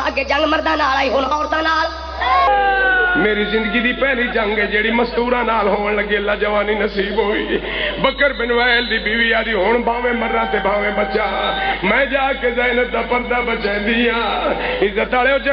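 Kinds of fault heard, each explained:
Section at the wrong speed: The first 2.47 seconds play 1.32 times too fast. The pitch sits about five semitones high, likely from a mismatched playback clock.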